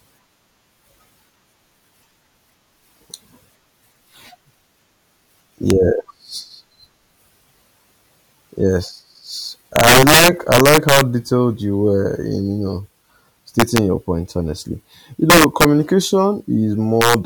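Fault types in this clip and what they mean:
Integer overflow: Loud speech peaks pass the largest integer and wrap to the opposite sign instead of being limited. Each jumps across the full range. Violent cracks, sharper than clipping, strike at 5.70 s, 9.76–11.01 s, 13.60–13.78 s, 15.30–15.65 s and 17.02–17.14 s.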